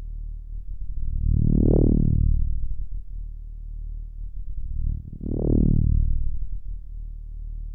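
No technical faults can be heard anywhere in this audio. There is no moment in it that needs a timestamp or a closer look.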